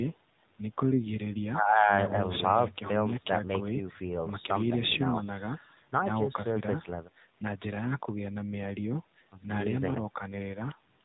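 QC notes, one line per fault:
Throughout: AMR narrowband mobile codec; nothing above 4 kHz, and the plainly buzzy, synthetic voice from pulse-driven vocal-tract modelling fits a low bitrate near 7.4 kbps.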